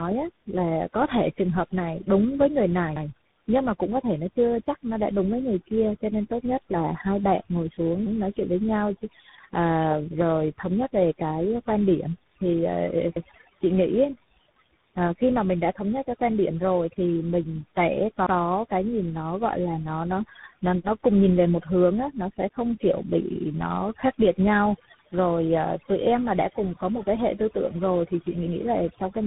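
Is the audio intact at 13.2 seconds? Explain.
No. From 13.16 to 13.27 s there is an overlapping chunks fault: the audio appears to be processed in 5-second blocks, and this block starts about 100 ms before the previous one ended. That 100 ms segment plays twice, which is heard as a brief stutter at the join.

The same moment also carries overdone noise removal. Bands judged to be noise are pushed far down, so the background drops and breaks up into twinkling specks. Quieter speech components are cut along with it.

Tandem speech coding runs through this point as well. The speech has been decoded and re-encoded through successive narrowband codec stages, each one working on the previous stage's damage. Nothing remains above 3.8 kHz, and the result sounds rough, muffled and warbly.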